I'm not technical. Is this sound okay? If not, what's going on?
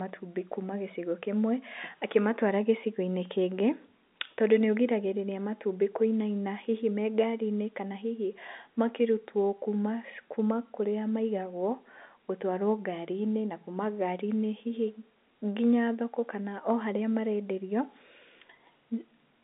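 Yes, no faults here.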